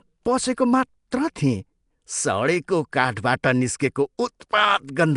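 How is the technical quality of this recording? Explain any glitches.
The speech is plainly degraded throughout: it has a rough, hissy halo and a smeared, underwater quality, with nothing above 10.6 kHz. This is likely Nellymoser compression, which spends a fixed few bits per sample in short blocks and fills starved bands with noise, consistent with roughly 44 kbps.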